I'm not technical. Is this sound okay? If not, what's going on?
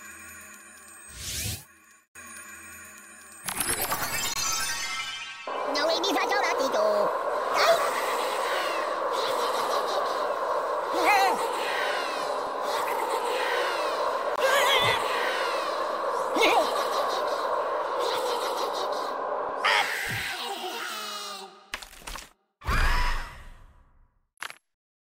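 No. There are three tiny dropouts, each a brief hole of silence, at 4.34 to 4.36 s, 14.36 to 14.38 s, and 24.38 to 24.40 s. They fall about 10 seconds apart. This is a gap between chunks: the audio was handled in 10-second pieces, and about 21 milliseconds of silence was left at each join. Nothing is missing, but the sound is briefly interrupted at each join.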